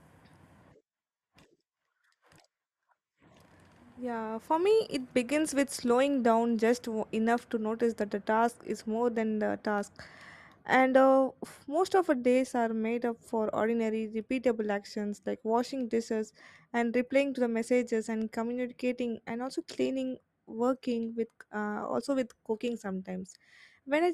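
Nothing in this speech recording stands out as a technical fault; it just runs along without a hitch.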